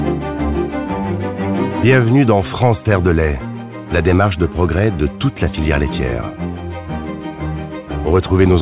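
Nothing here sounds like it's gone wrong; the audio simply has the narrow, phone-like character of a call line, with no content above about 4 kHz, which fits a G.711 mu-law path running at 64 kbps.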